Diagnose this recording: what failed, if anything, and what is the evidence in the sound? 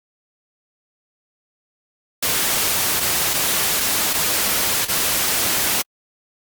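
Small timing hiccups recur at uneven intervals throughout the clip. This is clock drift between sender and receiver, a network and jitter-buffer fault. The sender's clock runs about 3% slow, so the receiver's buffer keeps draining and it repeats short pieces of audio to keep playback going.

Between 3.80 and 4.90 s there are brief ticks and smears: about four scattered short gaps, the longest around 40 ms, roughly 70 ms in total. These are lost or late network packets. The receiver filled each hole by extending the preceding sound.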